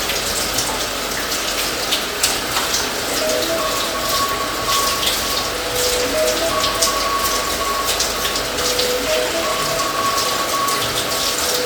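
No technical faults can be heard anywhere in the audio; the signal stays steady and intact throughout.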